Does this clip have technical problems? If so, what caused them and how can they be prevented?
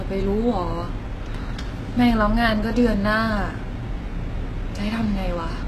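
Yes. The speech carries plainly audible HE-AAC compression from start to finish, likely from encoding at a very low bitrate, around 16 kbps. Nothing is heard above about 12.3 kHz, yet treble is still present up to there. That treble is rebuilt by copying lower bands upward, so s sounds come out gritty and metallic rather than simply dull. Plain low-pass filtering or a narrowband codec would sound muffled instead. Prevent it by encoding at a higher bitrate with full-band AAC or Opus.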